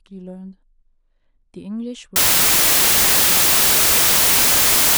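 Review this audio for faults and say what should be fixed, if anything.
From 2.16 s to the end, the speech is replaced by loud, harsh broadband noise: samples built from the wrong bytes. The reader misassembles each sample's bytes, so the fast-changing low bits dominate. A spectrogram shows broadband energy; the waveform becomes a dense block. To prevent it, check byte order, alignment and sample width against the stream's declared format before decoding.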